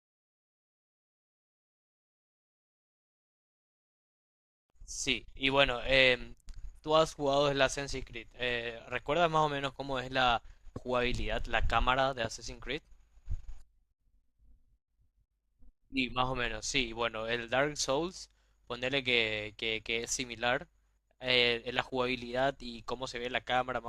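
No technical faults can be heard anywhere in this speech recording. There is nothing at any point that calls for a timestamp or an explanation.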